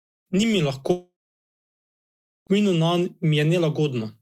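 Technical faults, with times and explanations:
0.91–2.50 s: long network dropout, likely from lost packets; the last sound stretches into a fading buzz, then 1.34 s of silence, and 1.56 s of audio never returns.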